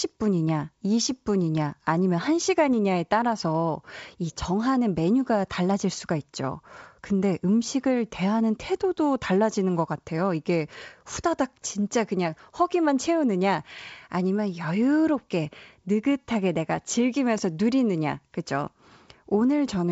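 Nothing here stands out as a fault; the speech comes across as an ordinary wideband telephone call, with the G.722-style coding doing its usual job and the sound tapering off above about 7.7 kHz.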